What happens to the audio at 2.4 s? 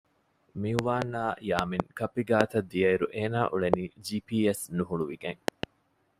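A single loud pop cuts in from 2.41 to 2.43 s. It stands about 25 dB above the speech, which carries on underneath. The likely cause is a sudden voltage pulse, such as a plug, switch or static discharge, added to the signal and shaped into a sharp thump.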